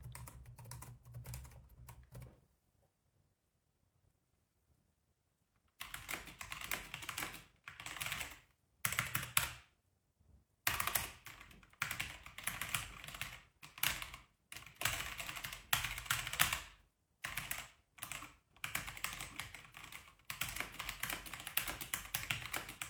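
Everyday-sound recording, no technical faults detected.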